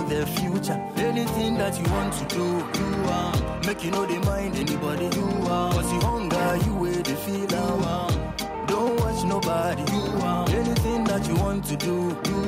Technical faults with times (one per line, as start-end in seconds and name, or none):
none